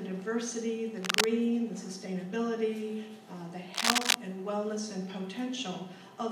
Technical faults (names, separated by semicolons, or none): cable scratch noise